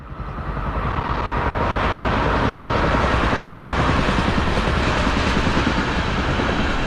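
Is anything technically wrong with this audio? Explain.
Yes, the audio has two kinds of network fault.

Repeated stalls (stutter) run from 0.92 to 2.07 s. Packets kept arriving late, so the jitter buffer emptied twelve times. Each time the receiver stretched the last sound to fill the wait, the longest for 130 ms. Together these fills make up about a third of that stretch. Nothing is lost, but the sound drags and stutters.

Call audio freezes occur at 2.49 to 2.72 s and at 3.36 to 3.75 s. They were likely caused by packets being held up in transit until the buffer ran dry. The last sound is carried on as a fading sound for 210 ms and then 370 ms, without dropping to silence. Playback then resumes where it stopped, so the audio after each freeze runs later by those amounts.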